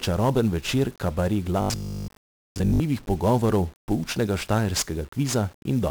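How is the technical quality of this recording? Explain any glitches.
Poor quality. Heavy 1-bit DFPWM compression runs through the whole recording, and a robotic stretch interrupts the speech.

1-bit DFPWM compression is present throughout. Each sample is one bit nudging an adaptive level, so broadband noise makes everything fuzzy and crackly, with treble buried in hiss.

From 1.62 to 2.80 s there is a robotic sound, likely from repeated short buffers. A 20 ms chunk loops, imposing a rigid 50 Hz metallic buzz, and most of the audio there is replaced.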